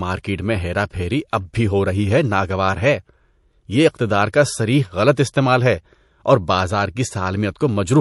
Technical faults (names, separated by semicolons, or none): MP3 compression; pre-echo